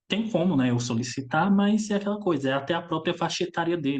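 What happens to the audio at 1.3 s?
Nothing goes wrong at 1.3 s; the speech carries on intact through that moment, with no dropout, click or distortion.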